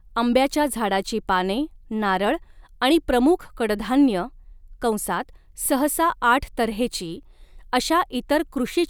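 At about 5.66 s there's a DC step: the waveform's zero line suddenly jumps to an offset of about -37 dBFS, the way it would if a converter recalibrated or an input carrying some offset got switched in. You hear it as a single low thump, and the speech carries straight on over it. The offset then drains away slowly, as if through a high-pass around 2 Hz.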